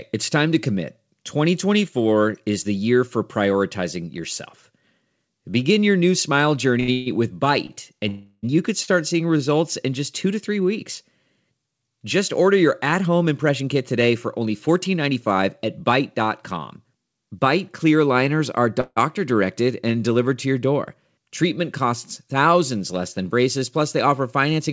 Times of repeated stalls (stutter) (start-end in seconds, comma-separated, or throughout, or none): 6.80-7.72